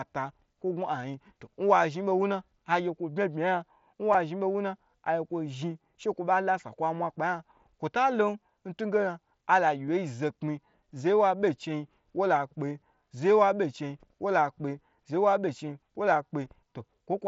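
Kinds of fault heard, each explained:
Concealed Bluetooth headset packet loss: audio packets from the headset were dropped and the receiver patched each gap by repeating a closely matching stretch of recent waveform. Three brief patches, at 4.13 s (about 15 ms), 9.88 s and 16.45 s (7.5 ms each); the two single losses at 9.88 s and 16.45 s are nearly inaudible.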